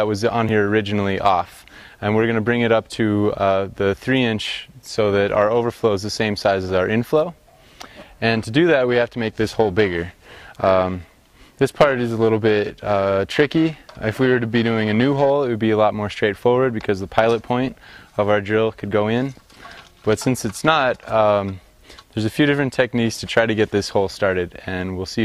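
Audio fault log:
8.88–15.30 s, periodic clock jitter: the converter clock wobbles at roughly 1 kHz, throwing sidebands around everything, so the sound picks up a rough, metallic edge.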